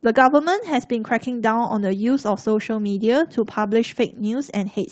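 Speech over an Opus call path, band-limited to about 8 kHz, which fits a 24 kbps stream. There's one lost packet rebuilt from error correction, at 3.63 to 3.65 s. Those 20 ms sound rougher and noisier than the speech around them, but there's no dropout. That points to a single lost packet whose low-bitrate backup copy, carried in the next packet, was decoded in its place.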